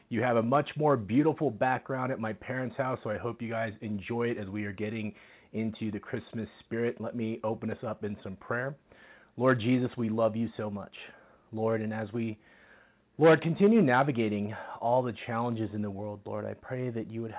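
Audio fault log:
Nothing stood out on listening, with the sound arriving over the call path and its content ending at about 4 kHz, as expected for G.711 A-law at 64 kbps.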